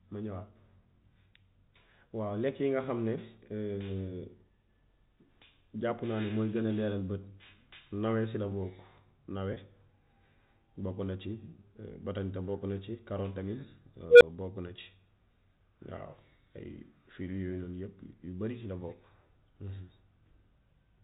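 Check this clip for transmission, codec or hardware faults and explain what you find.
Two faults turn up in this speech, which comes through a G.711 mu-law telephone path with the usual 4 kHz ceiling.

Right after "si la bokk nawe", at 9.54 to 9.56 s, there's packet loss with pitch repetition: about 20 ms goes missing, which fits one lost packet. The receiver loops the last pitch period, so you get a brief held, buzzy blip.

At 14.10 to 14.22 s an unstable filter takes off. Bad coefficients make its output feed on itself, and a tone around 500 Hz swells over roughly 110 ms into a loud squeal. It overflows and drops to about 12 ms of silence before resetting.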